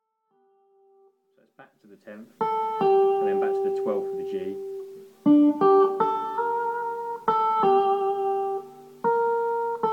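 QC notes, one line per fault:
No faults were found in this clip. The level rises in a smooth fade from the very beginning and reaches full level at about 2.46 s, with no click or hard edge.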